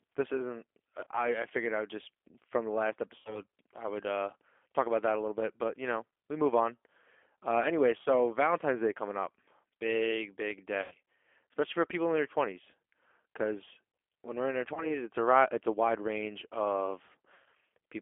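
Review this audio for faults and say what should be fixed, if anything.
The whole thing carries plainly audible G.729 codec damage. Only roughly 300 Hz to 3.4 kHz comes through, and the speech has that rough, synthetic edge of a pulse-and-filter rebuild, which fits an 8 kbit/s G.729A link. A wideband codec would fix it.

There's also VoIP packet loss concealed by the speech codec at 1.04–1.09, 3.19–3.42 (after "just from the last"), 8.03–8.09, 10.82–10.94, 14.74–14.98 and 17.34–17.48 s. The decoder stretches the last frame into a buzzy tone or a coloured noise that fades, and the voice stays weak afterwards. Jitter buffering or FEC would prevent it.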